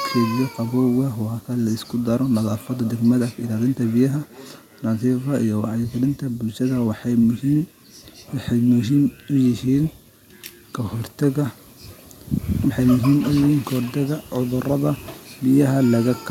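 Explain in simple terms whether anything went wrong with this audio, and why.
Between about 2.4 and 5.2 seconds, the speech comes back as a faint repeat a little under half a second later. This is feedback echo between two devices: two devices in the same room are on one call, and one device's microphone picks up what the other device's speaker plays. Each device cancels echo only from its own speaker, so this repeat passes through. Room reverberation would blur the sound, but this repeat comes back as a separate copy after the same gap each time.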